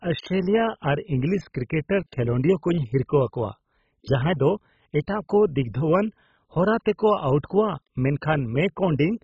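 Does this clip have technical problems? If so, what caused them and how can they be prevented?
Yes. The speech was likely squeezed through MP2 compression at a starved bitrate, consistent with something as low as 16 kbps. With so few bits to share among its 32 sub-bands, the encoder shut off everything above 7.5 kHz and quantised the remaining bands coarsely, switching some on and off from moment to moment. Throughout the clip this leaves the speech dull and muffled, overlaid with a gurgling, grainy distortion that shifts as the bands flicker. To prevent it, encode at a much higher bitrate or use a more efficient modern codec.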